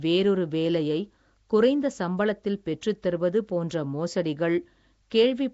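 Right from the start, the speech has that rough, hissy halo and underwater smear you get from Nellymoser compression, most likely the old Flash Asao codec. It codes short blocks at a fixed, small bit budget, so weak bands get no bits and are filled with noise instead. The damage is plainly audible, and nothing comes through above 7.7 kHz, which fits a low rate around 32 kbps.

At 2.81 s there's a brief pre-echo, a hiss spread over about 12 ms just before a sharp attack. The attack landed late in a coding block, so the quantisation noise sized for the loud part also spilled into the quiet moment ahead of it. The onset sounds softened and smeared rather than crisp.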